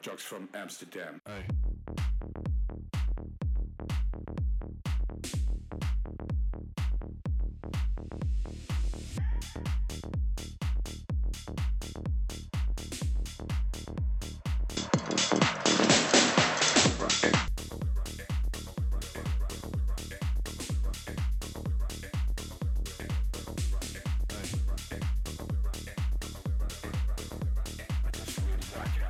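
The audio turns duller between 14.77 and 17.48 s, losing everything above 7.9 kHz, with a level shift of roughly 5 dB and a new noise floor some 30 dB down, and no gap at the changeover. The likely cause is the input switched to a poorer device.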